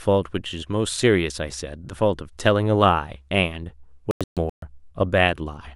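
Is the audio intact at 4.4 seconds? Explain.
No. At 4.4 seconds the speech falls inside a digital broadcast dropout lasting from 4.11 to 4.63 s. The receiver stopped getting clean frames and muted its output until valid ones returned. The sound breaks into several short silent holes spread over about 512 ms, losing 352 ms of audio in total. The longest single gap is 128 ms. That pattern fits roughly eleven lost frames. The missing material cannot be recovered.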